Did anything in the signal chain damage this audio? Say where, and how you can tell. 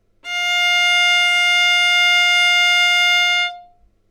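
Yes. Throughout the recording, a faint gritty fizz, roughly 35 dB below the sound, rides on loud and bright moments. This points to crude rate conversion at the sample-format stage, probably 48 kHz to 44.1 kHz by linear interpolation without filtering, which creates unrelated inharmonic tones.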